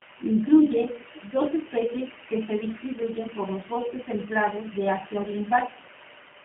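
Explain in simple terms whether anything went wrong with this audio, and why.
The whole clip, from start to finish, has been squeezed through the G.729 codec, a low-rate phone-call codec. It doesn't send the actual sound wave. It sends a rough description of how the speech was shaped and pitched, and the far end rebuilds it. That rebuild is why the speech comes out a bit rough and synthetic. Nothing above about 3.8 kHz survives, so the crisp top end is gone and everything sounds boxed-in, like a phone line.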